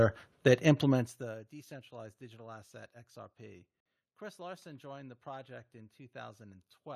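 A speech clip with one gap at a join of encoded pieces. At 3.80 s the sound drops out for about 54 ms and resumes at 3.86 s, carrying on from where it stopped. The edges are smeared by the codec. The audio was cut into pieces of about 4 s, encoded separately and joined untrimmed, so encoder start delay and last-frame padding remain as silence.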